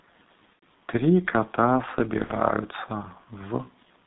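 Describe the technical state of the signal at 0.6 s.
At 0.6 s the signal is inside a stretch of VoIP packet loss concealed by the speech codec, running from about 0.53 to 0.64 s. Roughly 90 ms of audio went missing, which fits three lost 30 ms frames. The decoder filled the gap by carrying forward its last pitch and filter settings at falling gain, so the sound is stretched into a buzzy tone or coloured noise that fades. Unlike a plain dropout, the start of the gap is filled rather than silent, though the codec mutes the third lost frame, where 0.6 s falls, and the damage trails off instead of cutting cleanly.

Underneath this, the G.723.1 codec damage present across the whole clip is still there at 0.6 s. The sound is confined to about 200 Hz to 3.7 kHz and is heavily degraded, which points to a coder running near 6 kbit/s with long frames and a slowly updated speech model. The result is a muffled, hoarse quality with blurred consonants. 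A simple narrowband filter would not cause this: a filter alone would limit the bandwidth without adding the roughness and smearing that come from the codec's coarse modelling.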